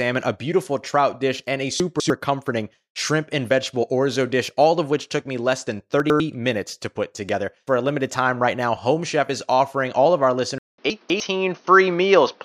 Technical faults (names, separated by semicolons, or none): chunks out of order; input switched to a poorer device